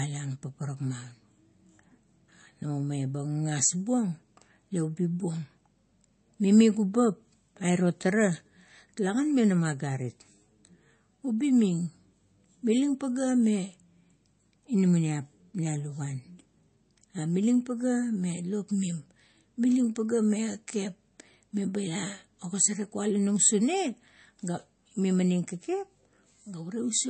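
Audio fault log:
Throughout: MP3 compression, and it's plainly audible. Nothing comes through above 8.3 kHz, so the speech sounds dull and boxed-in, and the s sounds turn watery and swirly, with a chirpy, metallic edge. The likely cause is an encoder starved of bits, which fits a low rate around 32 kbps: it lops off the treble at a fixed point and drops quieter frequency detail that flickers in and out between frames.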